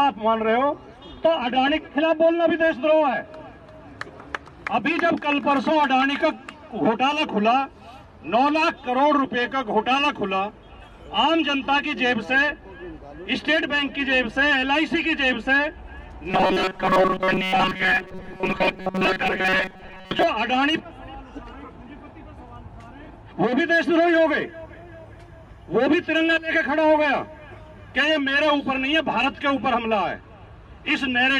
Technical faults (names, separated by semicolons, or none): robotic sound from repeated short buffers; timecode bleed